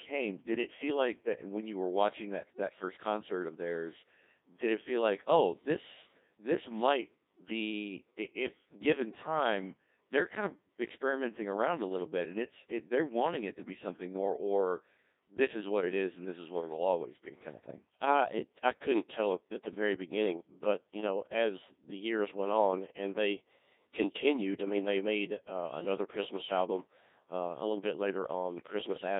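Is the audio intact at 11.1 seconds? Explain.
No. At 11.1 seconds, as throughout the clip, the speech passes through a Codec 2 vocoder at a rate that fits about 1.6 kbit/s. It is resynthesised from sine waves, sounding robotic and buzzy. A spectrogram shows harmonics confined to 200 Hz–3.7 kHz, and the waveform no longer matches natural speech.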